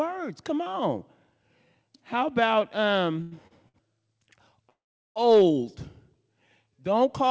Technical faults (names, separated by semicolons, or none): short stall from a late packet; call audio freeze